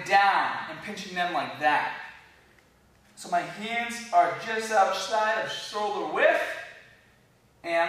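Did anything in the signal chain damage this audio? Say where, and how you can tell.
No, no signal-chain damage heard.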